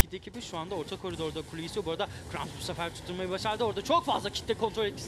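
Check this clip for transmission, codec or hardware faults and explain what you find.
There is one fault, right at the start of the clip.

At 0.00 s there is file tags played as audio: a short block of text metadata was decoded as samples. Because text characters map to values biased to one side of zero, they form an offset rasp. This block lasts only about 7 ms, so it comes out as a loud snap with hard edges. Its position at the very first instant and its one-sided offset set it apart from a mid-stream dropout click.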